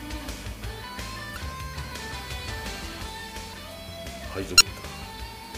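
Damaged data in a compressed stream appears at 1.34 to 1.37 s and again at 4.57 to 4.61 s: corrupted bytes make the decoder misread those frames and lose sync while it hunts for the next header, leaving a brief glitch each time.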